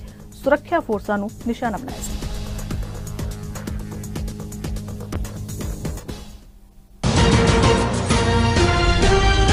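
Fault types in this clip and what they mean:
Call bitrate drop: between about 5.14 and 6.41 s the encoder gets starved of bits. The audio goes rough and muffled as the top end thins out, which fits a fall from around 64 to 19 kbps, before clarity comes back.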